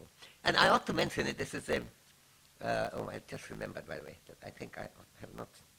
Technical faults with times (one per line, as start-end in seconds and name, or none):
0.00-5.78 block size mismatch (truncated)